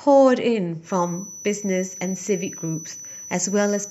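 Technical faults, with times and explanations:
0.80–3.90 s, feedback whistle: a thin 6 kHz tone runs behind the speech to the end, well below it and wavering slowly in level. Likely a loudspeaker-to-microphone loop held just short of runaway. Unlike a howl it never grows, and unlike an electrical tone it wavers.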